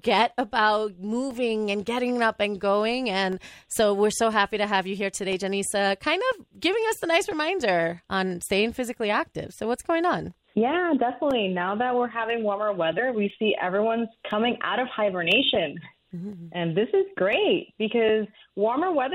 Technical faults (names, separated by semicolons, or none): periodic USB or driver dropouts